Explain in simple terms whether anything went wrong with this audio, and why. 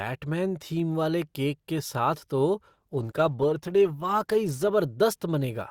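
Something did go wrong. From 2.69 to 4.69 s the speech plays as an adaptive stream at a lower bitrate. The connection slowed, so the player switched to a lower-quality version. Codec artefacts rise, then quality snaps back, with no gap.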